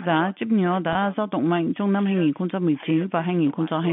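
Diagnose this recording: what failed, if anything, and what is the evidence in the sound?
Packet loss with pitch repetition on the network path, 0.93 to 0.95 s, right after "chip nhỏ": about 20 ms of repeated pitch period, giving a brief buzzy hold.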